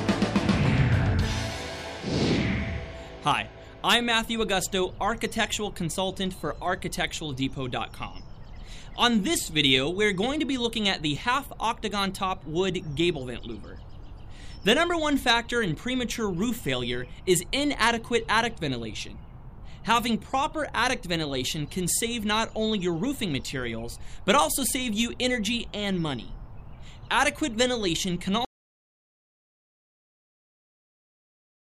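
At 28.45 s the audio drops out to silence and stays dead for the final 3.2 s, no room tone at all, likely a lost input link.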